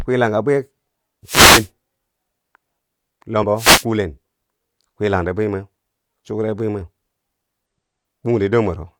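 A speech recording with two kinds of fault. Wireless microphone noise hits appear from 1.25 to 1.69 s and from 3.55 to 3.85 s: the analogue FM radio signal fades as reflections cancel, so receiver noise swells into a swish of static over the voice. Damaged data in a compressed stream shows up at 3.39 to 3.43 s and at 7.66 s. Corrupted bytes make the decoder misread frames and lose sync, producing a short chirp or blip. It is abrupt and digital-sounding, unlike the gradual noisy swell of the radio fades.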